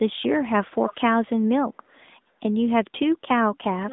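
From the start, the speech carries AMR narrowband mobile codec damage. Nothing passes above 3.8 kHz, and the line band runs from roughly 200 Hz to 3.7 kHz. The plainly buzzy, synthetic texture fits a mid-rate mode near 10 kbps. A simple low-pass filter would narrow the band without that buzz.

From 3.25 s to the end at 3.93 s, the voice dips by as much as about 35 dB for about half a second in total. This is speech suppressed in double talk, likely an echo canceller ducking the talker while the far side spoke.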